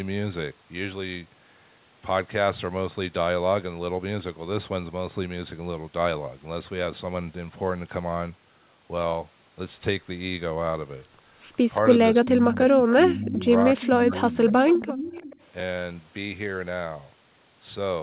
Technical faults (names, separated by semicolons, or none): speech suppressed in double talk; echo leak